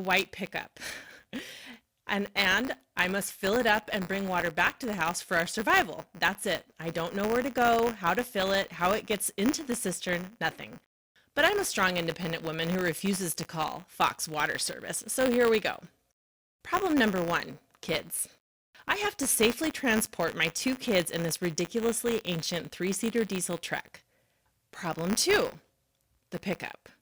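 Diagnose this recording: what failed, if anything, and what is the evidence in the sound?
Buffer tearing at the driver or buffer stage, throughout the speech: a robotic rattle at 100 Hz, which fits a 10 ms buffer period. A small slice of each period replays audio roughly 20 ms stale between hard joins. Unlike mains hum, the buzz vanishes in pauses.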